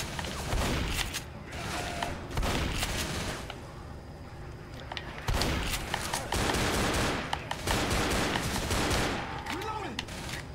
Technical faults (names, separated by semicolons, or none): none